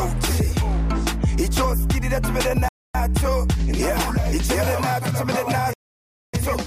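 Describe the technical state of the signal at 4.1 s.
At 4.1 s the signal is intact, with no dropout, distortion, glitch or other fault audible at that moment.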